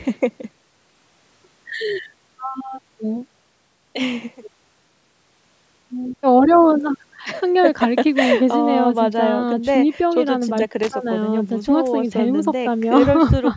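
Speech heard through call microphone processing, with nothing above 8 kHz, carries one loose connector crackle from 10.83 to 10.92 s. A worn or dirty contact makes and breaks, chopping the signal into a brief scratchy burst. Unlike evenly spaced digital clicks or a single clean dropout, the crackle is ragged and irregular, which points to a physical contact.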